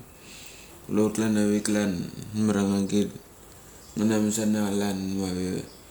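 No technical faults can be heard in this speech recording. Nothing in it stands out as a problem at any point.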